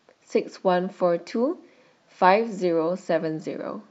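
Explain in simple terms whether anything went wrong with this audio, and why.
Nothing went wrong here.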